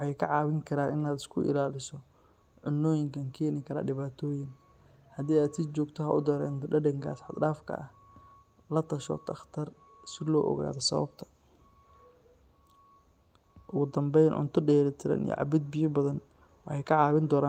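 No technical faults can be heard anywhere in the recording.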